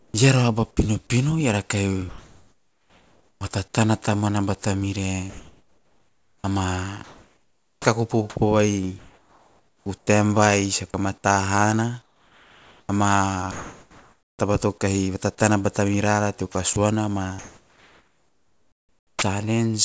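Comfort noise in place of the background appears first from 0 to 0.14 s and again from 2.09 to 3.41 s. The real room tone gives way to a smooth, featureless hiss, about 4 dB and then about 3 dB quieter than the surrounding background. This is likely discontinuous transmission: the sender stopped sending during the pause, and the receiver filled it with synthetic noise shaped only roughly like the original. Behind all of this sits the G.722 call path, so nothing is heard above 8 kHz.

An onset clipped by the voice detector follows right at the end of that gap, from 3.38 to 3.41 s. A second one, from 3.72 to 3.74 s, comes just before "tamuana bata mire". Speech resumes abruptly, with 30 ms and then 20 ms of its soft start missing. The likely cause is a detector slow to register the returning sound, with filler noise played instead of the first moments.

Comfort noise in place of the background returns after "tamuana bata mire", between 5.30 and 10.07 s. 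Within that stretch, another onset clipped by the voice detector cuts about 20 ms from a start at 6.42 to 6.44 s. A further synthetic patch runs from 12.02 to 14.39 s, each again a flat, steady hiss substituting for the true background.

Sound chopped by the voice detector fills 16.52 to 19.22 s. About 1.9 s of that span is swapped for filler, so quiet syllables and word edges drop out. The detector is likely toggling transmission on and off repeatedly here.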